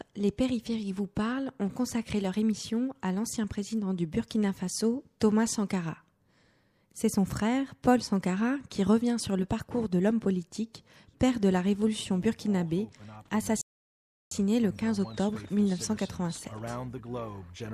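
At 13.61 s the sound cuts out completely and stays silent until 14.32 s. This is a rebuffering stall. The player ran short of downloaded audio and had to wait for more to arrive. About 0.7 s of dead air is inserted. When playback returns, it picks up at the exact point where it stopped. Nothing is skipped or repeated. The gap is pure added time, heard as an abrupt hole in the sound.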